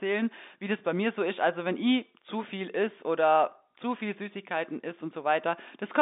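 Speech over G.711 telephone coding, band-limited to the line's 250 Hz to 3.7 kHz with nothing above 3.8 kHz, and no faults to report.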